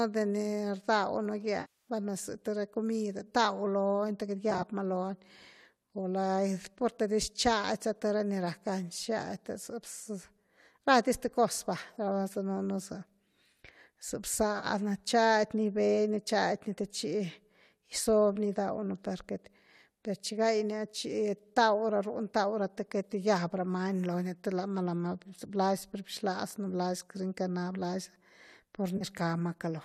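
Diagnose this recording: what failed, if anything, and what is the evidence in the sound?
Frames went missing in transit, which points to AAC frame loss with concealment. At 1.61 to 1.90 s, a 260 ms gap decays toward silence and fades back. Then 4.51 to 4.63 s, 14.59 to 14.66 s and 28.97 to 29.04 s are brief phasey smears where the decoder reuses the last good spectrum.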